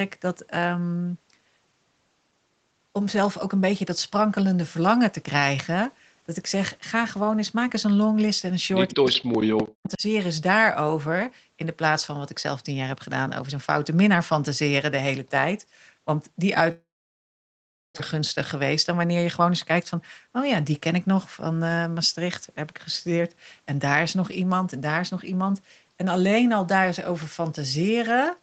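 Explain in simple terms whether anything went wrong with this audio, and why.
Between 8.92 and 10.02 s the speech repeatedly sinks to near silence, roughly a second lost in all. This is speech suppressed in double talk. The likely cause is that both sides talked at once, and the echo canceller could not tell the talker from the loudspeaker echo, so it turned everything down.

At 9.13 and 9.85 s a faint, brief copy of the sound arrives 188 ms late. This is an echo leak. One side is likely on a loudspeaker, and its echo canceller let a scrap of the returning sound slip back through.

From 16.71 to 18.01 s the sound breaks off. A short fading buzz fills the start, then about a second of silence, and the speech resumes with a piece missing. This is a long network dropout, likely caused by packets that never arrived in time.

From 18.14 to 21.61 s the speech runs about 6% fast at unchanged pitch and sounds slightly hurried. 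This is a jitter buffer speed-up. The receiver trimmed tiny slices, around a fifth of a second in total, to catch up on built-up delay.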